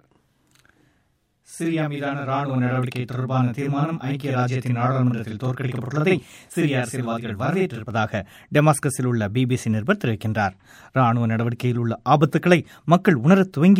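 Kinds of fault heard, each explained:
Channel delay (doubling): One channel lags the other by 40 ms, which fits a long buffer, and both are mixed to mono. The late copy is heard as a separate doubling of each sound at equal level. This lasts from the start until 7.91 s.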